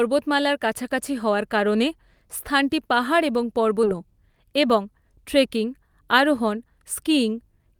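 A speech clip. At 3.83 to 3.85 s, just after "কারণে স্থানটি পাহাড় এবং", a stretch of audio was dropped with later material already queued, a skip ahead. Around 0.4 s of speech vanishes and the two sides butt together with no filler, so the sentence lurches forward mid-phrase. From 3.93 to 7.12 s, a jitter buffer speed-up follows: the buffer was holding too much audio, so it trimmed short pitch-period slices repeatedly, about 150 ms in total. The speech runs at 104% speed with unchanged pitch.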